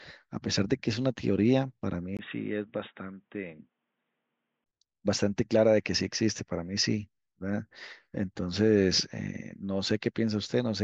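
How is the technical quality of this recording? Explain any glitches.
The recording has one clear glitch, a temporary drop in quality partway through the speech.

Input switched to a poorer device, from 2.17 to 4.66 s. The capture likely moved to a lower-grade microphone or headset link, which cuts the bandwidth so nothing comes through above 3.8 kHz. The speech turns dull and boxy, about 10 dB quieter, over a fresh noise floor roughly 45 dB down. A 20 ms gap marks the switch before the fuller sound returns.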